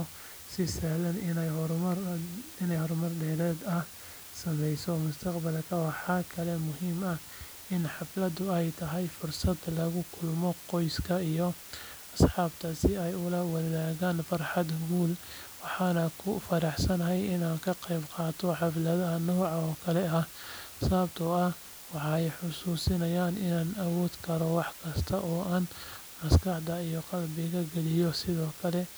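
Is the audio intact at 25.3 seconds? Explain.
No. At 25.3 seconds the speech sits under a constant, even hiss, strong at only about 15 dB below the speech, yet with no crunch or distortion on the speech itself. This is low bit depth with dither, present throughout the clip rather than only at this moment. The audio is stored with just 7 bits, and random dither noise was added before rounding, so the coarse quantization error turns into steady white noise instead of distortion.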